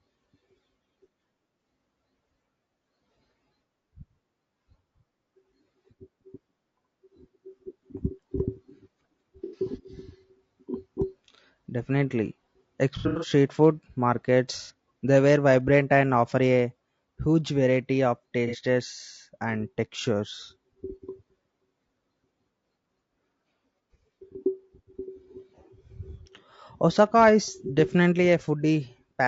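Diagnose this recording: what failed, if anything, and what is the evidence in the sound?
Throughout, the speech sounds rough and grainy, with a hiss-like fill between the harmonics and a thin, somewhat synthetic top end. That points to the codec stage, most likely low-delay AAC compression (AAC-ELD) at a low bitrate, which fits roughly 32 kbps. Its short frames resolve pitch harmonics coarsely and leave too few bits to code the gaps between them cleanly, so the damage is plainly audible.

Brief smeared, noisy, phasey patches appear at 9.44–9.58 s, 12.98–13.30 s, 14.63–14.71 s, 18.47–18.57 s (right after "variety of") and 20.36–20.40 s. The 12.98 s event is broken up over about 240 ms, with the longest continuous dropout around a tenth of a second. This is AAC frame loss with concealment, arising in transmission: missing frames are rebuilt from the last good spectrum, producing smeared, noisy or phasey stand-in sound rather than silence.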